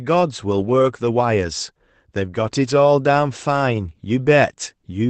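At 0.59 to 0.69 s, a lost packet rebuilt from error correction: the missing audio, about 60 ms, consistent with three 20 ms packets, was decoded from the low-bitrate copies carried by the following packets, so there is no gap. The speech turns briefly rougher and grainier, and a spectrogram shows smeared, noisier harmonics there while the waveform stays continuous, within the Opus call's 8 kHz band.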